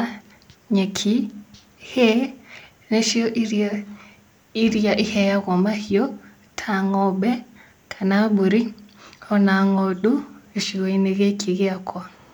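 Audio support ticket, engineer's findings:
No technical faults detected.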